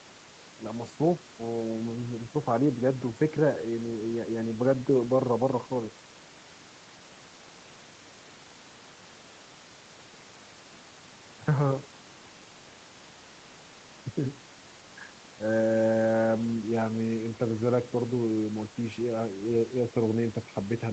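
No technical faults can be heard in this speech clip. It has passed through a call's microphone processing and an Opus call codec, and nothing is heard above 8 kHz, which fits the wideband setting of that call path.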